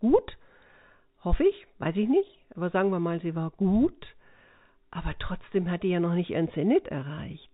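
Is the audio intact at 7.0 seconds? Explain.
Yes, the speech at 7.0 seconds is intact, carried through G.711 telephone coding with its usual 4 kHz band limit and no fault at that moment.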